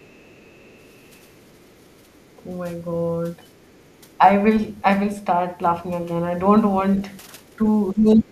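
A speech recording in which the echo canceller likely failed to strip the loudspeaker signal from the microphone, so the other side's voice leaks through as a faint second voice, far below the talker, from 0.00 to 2.33 s, 3.42 to 4.18 s, 7.11 to 7.17 s and 7.42 to 7.68 s. When both sides then talk at once, the canceller likely mistakes the talker for echo and turns everything down. This is speech suppressed in double talk: from 7.93 s to the end at 8.31 s, the talker's voice sinks by as much as about 30 dB.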